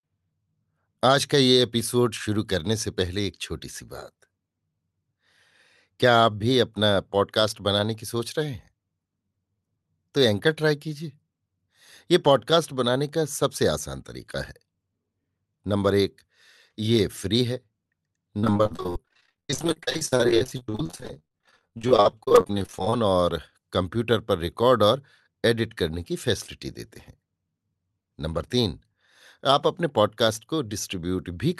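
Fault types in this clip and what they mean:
Repeated packet loss (robotic sound): between 18.39 and 22.93 s, many short holes, the longest 57 ms, are patched by prolonging the preceding sound, so about 44% of that stretch is filler and choppy. Unlike a single dropout, the gaps keep recurring.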